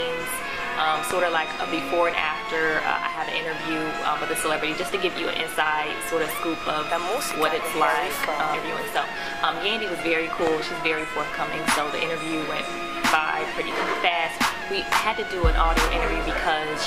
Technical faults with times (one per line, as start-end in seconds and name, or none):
1.11-1.13 loud pop
7.31-7.33 loud pop
10.47-10.49 loud pop